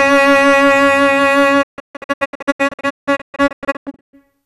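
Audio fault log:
throughout: hard clipping. The music reaches some stage about 5 dB hotter than it can pass, so roughly one sample in twenty is sheared flat at the ceiling. Those squared-off peaks add high harmonics, heard as a rough, crackling edge on the loud peaks.
1.61 to 4.15 s: digital broadcast dropout. The receiver kept losing valid frames and muted each time until clean data returned, with fades of about 20 ms. About 1.56 s of music vanishes in repeated holes, the longest about 168 ms, leaving choppy, stuttering gaps.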